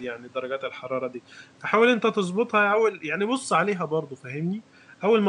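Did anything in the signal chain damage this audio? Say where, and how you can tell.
No, nothing in the chain has damaged this speech recording. The faint room noise sits about 32 dB below the speech and belongs to the space around the microphone, not to the equipment.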